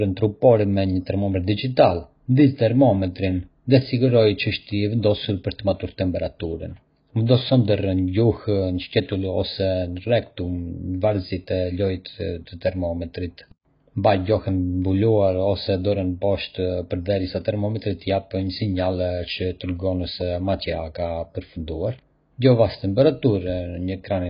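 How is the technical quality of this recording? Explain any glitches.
The recording is technically poor: heavy AAC compression runs throughout the speech. The encoder was likely starved of bits, working at a rate that fits roughly 16 kbps AAC-LC. With so little data per frame, it discards high frequencies entirely, leaving nothing above 5.1 kHz, and coarsely quantises what remains. The speech therefore sounds dull and muffled, with smeared detail, a warbling, watery texture on held sounds, and fizzy, blurred sibilants.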